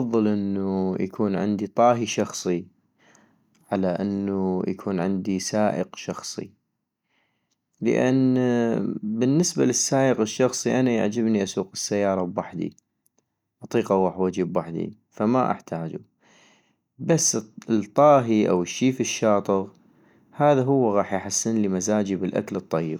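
No technical faults turn up anywhere in this speech recording, so there's nothing here to flag.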